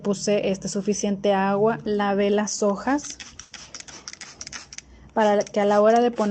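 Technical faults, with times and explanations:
3.41 to 3.53 s, burst of packet loss: about 100 ms of audio never arrived in time, so the receiver stretched the last sound it had and faded it out before playback picked up further along, with that stretch missing. It is heard as a brief held, dimming smear followed by a jump. On a spectrogram, the content, already capped near 8 kHz by the call path, turns into a frozen continuation of the last sound that thins out. The waveform shows the last sound continuing with a shrinking envelope, then an abrupt change of shape.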